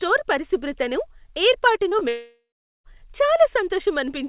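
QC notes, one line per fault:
1.76 s, 1.89 s and 1.99 s, short concealed packet loss. Three brief gaps come in quick succession. Each drop loses about 20 ms of speech. The receiver patches each hole for roughly 13 to 19 ms by extending the last bit of sound, then crossfades back into real audio. Each patch is heard as a small smear or wobble. The three cluster within about 0.27 s, so the speech briefly sounds unsteady. The G.711 mu-law call path stops near 4 kHz.
2.09 to 2.86 s, long network dropout. About 0.76 s of speech never plays. The receiver first stretches the last sound into a fading buzz or hiss. That concealment soon gives out, leaving roughly 0.41 s of silence. Speech then resumes further along, with the lost stretch simply gone. This is likely a network stall that ran far past what concealment can cover, coming right after the burst of short losses.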